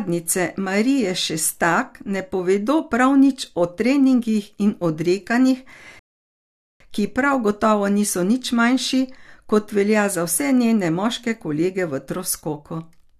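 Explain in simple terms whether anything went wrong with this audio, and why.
The player ran short of downloaded audio at 5.99 s and had to wait for more, a rebuffering stall. The speech drops to silence until 6.80 s, then picks up exactly where it left off with "ki prav gotovo niso". Nothing is skipped, but about 0.8 seconds of dead air is added.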